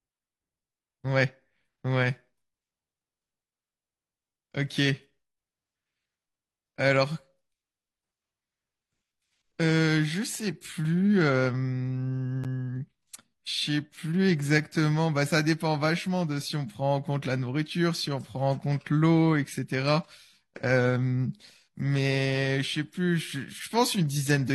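At 12.44 s the speech drops out for roughly 11 ms, a brief hole with abrupt edges on both sides. This is a gap between stream segments: the timestamps of two adjacent segments, which appear to be 4 s long, do not meet, and the player pads the difference with silence. Nothing is lost from the audio; it is pushed about 10.8 ms later.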